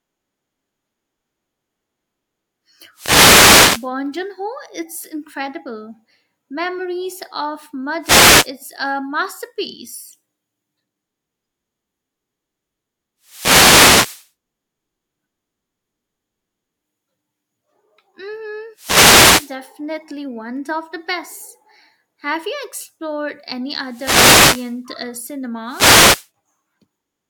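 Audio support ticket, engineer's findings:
Wireless microphone noise hits, six events: 2.93–3.90 s, 8.01–8.50 s (just before "a masterpiece"), 13.22–14.31 s, 18.74–19.56 s, 23.82–24.82 s (just after "you explored any"), 25.66–26.29 s. Short static swishes, roughly 0.5 to 1.1 s each. Component: analogue FM radio link. Mechanism: multipath reflections cancel the carrier, so receiver noise rises through each fade.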